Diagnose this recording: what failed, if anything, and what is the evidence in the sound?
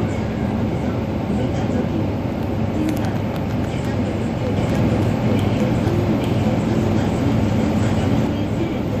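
Likely an edit holding two copies out of step: a doubled audio track from 4.57 to 8.27 s, a dry, equally loud copy trailing about one second behind.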